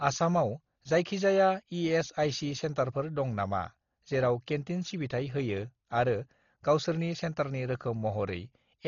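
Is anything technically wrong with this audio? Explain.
Yes. Throughout the speech there is heavy codec damage, likely from Dolby Digital compression at a very low bitrate. Nothing is present above 6.9 kHz, so the audio sounds dull and muffled, and a rough, fluttering noise clings to voiced tones. The encoder starved many frequency lines of bits, so the decoder filled them with dither noise, a level of damage that points to roughly 32 kbps. On a spectrogram there is a flat ceiling at 6.9 kHz, with speckled, grainy patches between harmonics.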